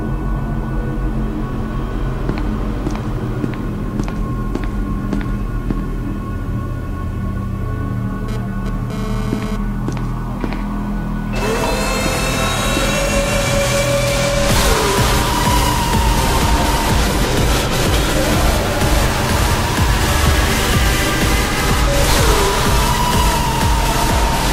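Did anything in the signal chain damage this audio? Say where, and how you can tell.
Yes, there's a GSM phone buzz on the analogue side, from 8.28 s to 9.56 s. You get a harsh, raspy buzz pulsing at about 217 Hz, loaded with harmonics and sitting only about 11 dB under the programme. It has nothing to do with the content and it appears and then stops, which fits a nearby 2G phone doing a short data transfer. The phone transmits in bursts, and some unshielded wiring or an input stage rectifies that RF and leaves its burst rate in the audio.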